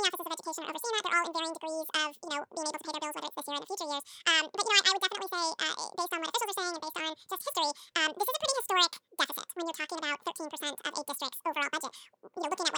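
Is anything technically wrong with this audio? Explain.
Yes. Throughout the whole clip, the speech shows audio read two samples at a time, so it plays at double speed. The reader treats each consecutive pair of samples as a single frame, as if the stream had two channels or samples twice as wide. Every second of recorded audio passes in half a second, and pitch rises by 12 semitones, a full octave, which gives the speech a chipmunk-like shift.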